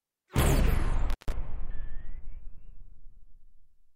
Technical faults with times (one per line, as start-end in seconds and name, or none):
1.10-1.32 intermittent contact